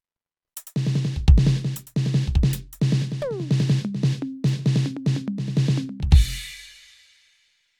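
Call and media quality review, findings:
Nothing stood out on listening to the music clip.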